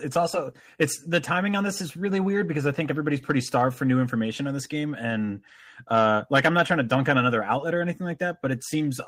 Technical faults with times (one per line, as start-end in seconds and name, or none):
none